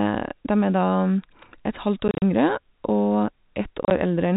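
Packets went missing in transit on this telephone-band speech clip and the receiver filled each gap with silence, which is packet loss filled with silence. Around 2.08 to 2.22 s and 3.83 to 3.91 s the sound breaks into dropouts up to 40 ms long, which fits 10 ms packets.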